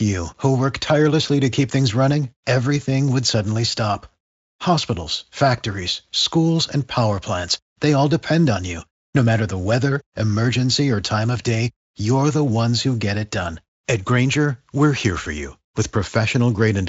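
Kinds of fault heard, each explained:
No faults heard; the speech runs up to 7.7 kHz with nothing above, as the encoding in use would give.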